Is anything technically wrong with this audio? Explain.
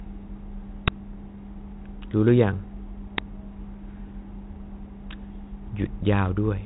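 Yes. The speech has an uninitialised buffer fault at 0.88 s and 3.18 s: about 6 ms blocks, fitting a 256-sample buffer, played before being filled. Each is a loud crack, a sharp waveform spike and bright broadband stripe. The G.726 telephone band, empty above 3.9 kHz, stays intact.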